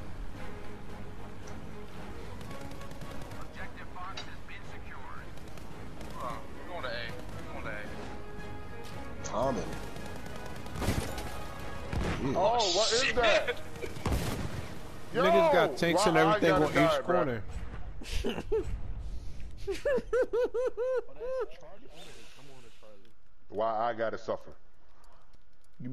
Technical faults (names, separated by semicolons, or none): none